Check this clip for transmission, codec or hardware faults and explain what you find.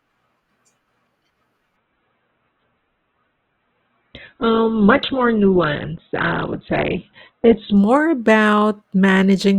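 One transmission fault is present. From 1.76 s to 7.76 s the speech suddenly turns dull, with nothing above 4.2 kHz and codec smearing, then snaps back to full clarity with no gap at either edge. This is an adaptive stream at a lower bitrate. The player switched to a cheaper encoding while the connection was slow, and the sound points to a fall from roughly 64 kbit/s Opus to about 8 kbit/s.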